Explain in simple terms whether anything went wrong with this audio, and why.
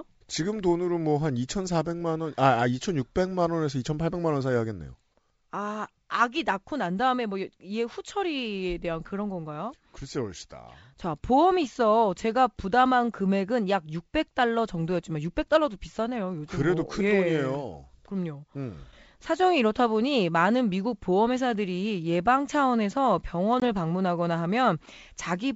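Packet loss on an ADPCM call hits near the end, at about 23.60 to 23.63 s, where a 20 ms hole cuts the speech to sudden silence, roughly one packet's worth. The coder sends only small changes from moment to moment, so the receiving end has to track the sound continuously. Missing that slice throws its tracking off, and the speech comes back slightly distorted until it catches up. The wideband telephone sound itself stays clear.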